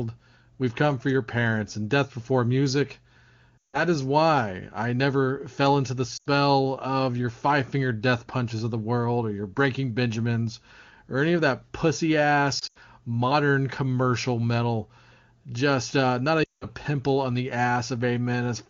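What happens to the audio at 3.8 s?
Lost AMR speech frames from 3.58 to 3.84 s: the decoder conceals the missing 160 ms by repeating stale parameters at falling gain, so speech quickly drops to near silence, then returns briefly weak or rough before "is why I never".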